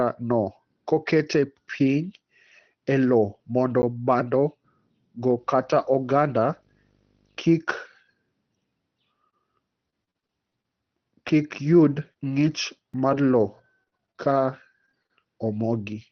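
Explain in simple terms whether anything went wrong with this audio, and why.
At 3.82 s and again at 12.94 s the speech gives a tiny click or tick, a very brief hole of about 10 ms and then about 4 ms. Each is a block of digital silence: the system failed to deliver those samples in time, so the sound dropped abruptly to nothing and back.

From 5.38 to 7.38 s a low buzz sits under the speech, with a faint hiss above it and a very high whine near 15.6 kHz. This is video or display buzz, electrical noise from a screen or video cable leaking into the audio. The buzz repeats 50 times a second, matching the picture's refresh rate.

Between 9.30 and 10.66 s the speech turns choppy, with pieces missing. This is repeated packet loss: eight small pieces of the call, the longest about 33 ms, went missing in quick succession. Each hole was patched by stretching the previous sound.

At 11.29 s a short moment, about 20 ms, sounds rougher and noisier, without any gap. 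Here a lost packet was rebuilt from error correction: the next packet carried a lower-quality backup copy, and that copy was played instead.

From 11.93 to 15.11 s there are scattered short gaps: roughly ten brief ticks, smears or hiccups, the longest around 30 ms. Individual packets arrived late or not at all, spread out over that stretch, and each small hole was filled by continuing the last sound.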